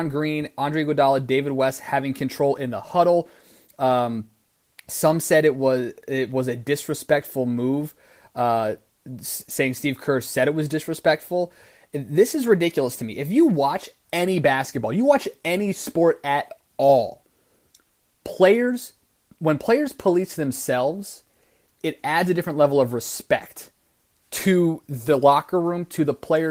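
No technical faults are audible anywhere in this speech.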